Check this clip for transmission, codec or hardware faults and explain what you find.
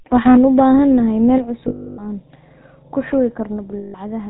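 The speech carries four kinds of fault: codec damage throughout, a clipped passage near the start, two sudden level drops, and two stretches of lost frames.

Across the whole clip the speech sounds buzzy and gravelly, dull and boxed-in, with the roughness clearly audible. This is the GSM full-rate codec, and the character fits its 13 kbps form. It rebuilds the voice from a vocal-tract filter driven by evenly spaced excitation pulses, keeping only a third of the excitation samples. That sparse pulse train gives the grit, and cutting everything above 4 kHz takes away the air and crispness.

From 0.26 to 0.6 s the loudest syllables take on a harsh, crackling edge. This is likely microphone overload. The peaks run about 5 dB past the converter's ceiling, so their tops are sliced flat, clipping around 7 percent of the samples in that stretch. The squared-off waveforms add the rough distortion that rides on the peaks.

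At 1.38 s, and again at 3.57 s just after "ku shubi", voice and background drop together in a single step. The first drop is about 6 dB and the second about 2 dB. The likely cause is the microphone volume being stepped down by the call software, which pulls the device's input gain once it judges the signal too hot. Because the gain moves at the source, the room noise falls with the speech.

From 1.68 to 2.05 s, and from 3.78 to 3.95 s after "ku shubi", the sound freezes into a rough, metallic ring. These are lost GSM frames. The decoder repeats the last good frame's settings at falling volume to cover the holes. The first gap lasts 300 ms, which fits about fifteen 20 ms frames. The second lasts 160 ms, roughly eight frames, and is heard as a shorter held ring.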